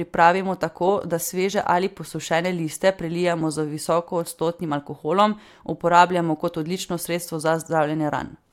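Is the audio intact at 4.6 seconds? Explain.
Yes, at 4.6 seconds the speech plays through cleanly, with no dropout, click, distortion or other fault at that moment.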